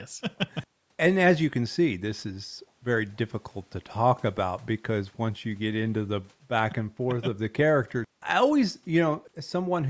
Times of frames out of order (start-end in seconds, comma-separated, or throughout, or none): none